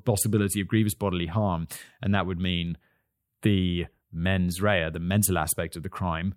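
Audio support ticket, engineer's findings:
Channel delay (comb filtering), 2.67 to 4.49 s, from after "harm and that would" until "rea the". Speech turns thin and phasey, the top end hollowed out. Probable component: stereo-to-mono fold-down with one channel slightly late. Mechanism: an offset of about a tenth of a millisecond, which fits a lag of only a few samples, cancels shared content at evenly spaced frequencies. The first notch sits around 5 kHz, so the damage is mostly in the upper range.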